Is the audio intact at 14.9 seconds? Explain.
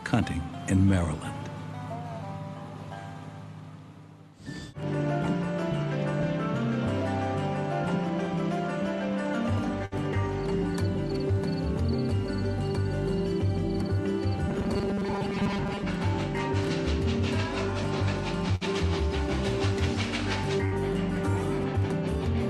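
No. Robotic sound from repeated short buffers runs from 14.48 to 15.83 s: a rigid, metallic 200 Hz buzz replaces the sound, likely because audio arrived too seldom and about 70 percent was filled by repeating a 5 ms buffer while real audio was skipped.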